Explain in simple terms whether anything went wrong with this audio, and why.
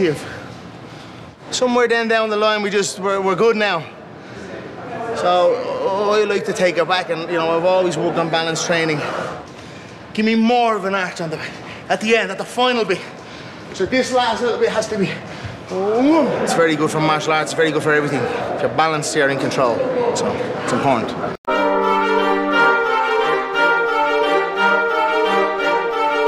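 Nothing went wrong here that a listener would notice; the audio runs steadily with no dropouts, glitches or odd noises at any point.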